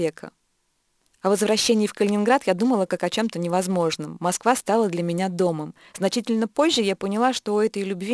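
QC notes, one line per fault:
throughout, aliasing: the speech was resampled to what sounds like a 22 kHz rate without a low-pass filter, so content above 11 kHz folds back as unrelated tones roughly 20 dB down, making sibilants gritty and metallic. A spectrogram shows energy packed hard against 11 kHz, with mirrored streaks below it.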